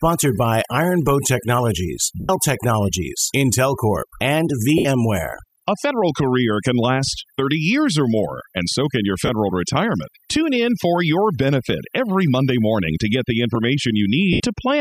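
Speech, with overdone noise removal running the whole way through. The background has been pushed down with little twinkling specks left in it, and the quieter parts of the voice get pulled under with the noise bands. There are also four dropouts from lost LE Audio frames, at 2.2 s (90 ms), 4.78 s (70 ms), 9.26 s (30 ms) and 14.33 s (70 ms). Each one smears into a noisy repeat of the sound just before it, with the longer ones fading away, which points to the LC3 decoder in the Bluetooth link likely concealing runs of missing 10 ms frames.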